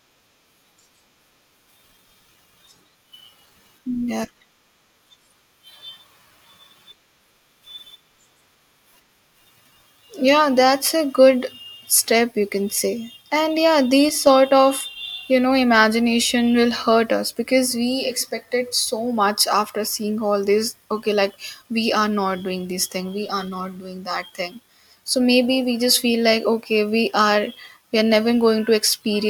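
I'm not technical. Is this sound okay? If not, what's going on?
No. From about 14.09 to 14.27 seconds the speech abruptly turns quieter, then returns. That is a channel dropout, most likely one side of a stereo recording cutting out briefly. Unlike a full dropout, the sound never goes silent; it just loses half its strength.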